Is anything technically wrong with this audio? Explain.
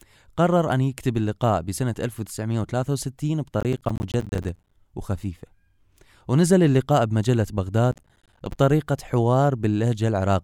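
Yes, there's processor overload crackle in two patches of this speech, from 3.61 to 4.72 s and again from 7.92 to 8.57 s. The system couldn't fill its small audio buffers in time, missing dozens of deadlines over each short stretch and dropping silence into each gap. Those hard-edged holes, each around 10 ms long to match the buffer size, pile up into a gritty, tearing crackle over the speech that stops once the load eases.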